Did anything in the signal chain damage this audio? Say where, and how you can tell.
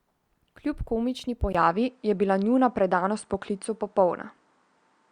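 Yes. At 1.53 s the speech drops out for about 20 ms, then runs to the end with nothing above 9.6 kHz, a level shift of around 5 dB and a faint new noise floor. That points to the input likely switched to a poorer device at the driver level.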